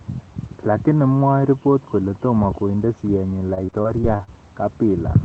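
Repeated packet loss (robotic sound) runs from 3.47 to 4.29 s, right after "kole tomo konde siyenyi". Audio packets went missing again and again. Each hole, the longest about 35 ms, was patched by stretching the previous sound, and the next dropout followed almost at once. Roughly a fifth of a second of this stretch is rebuilt rather than real, so the speech turns choppy, with fragments missing, over a call-codec signal band-limited to about 8 kHz.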